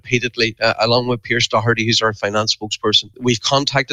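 A noise suppressor applied to music or sounds runs through the whole clip. Tuned for speech, it treats steady tones and decays as noise. Its gain keeps moving, with level swings of about 15 dB. Held sound pumps and thins while attacks pass.

From 0.00 to 0.61 s comes the first sound cut by the noise suppressor. It drops by up to about 14 dB for roughly a third of a second in total. The same cut returns at 2.57 to 2.77 s and at 3.03 to 3.24 s, each about 14 dB deep. Sustained parts and tails sink and end early. Sharper onsets stay clearer, so the sound flutters.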